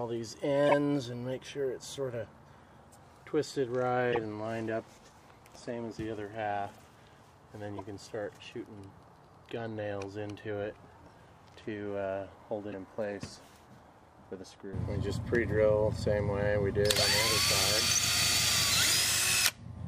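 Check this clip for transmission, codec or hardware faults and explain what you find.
There are two kinds of fault here: a run of corrupt frames decoded early on, and one spot where compressed frames were skipped.

Corrupt frame decoded happens at 0.67–0.73 s, 4.12–4.24 s, 6.74–6.80 s and 7.77–7.80 s. Damaged bits got decoded anyway, so energy lands at wrong frequencies across what sounds like a few frames each time. You get short chirpy bursts, loud in the first two (about -15 and -20 dBFS), much fainter later.

Compressed frames skipped shows up at 12.71–12.74 s, where about 30 ms of audio just isn't there. The decoder jumps forward past the lost frames, so the audio leaps ahead at the join.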